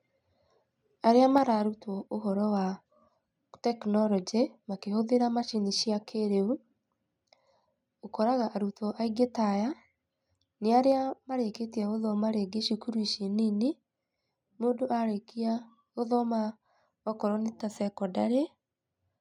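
Speech with a microphone volume stepped down twice: at 1.38 s the whole level, background included, drops by about 4 dB, and at 10.92 s by about 2 dB. Unlike gradual gain riding, each drop is instant and stays put, likely the call software lowering input volume.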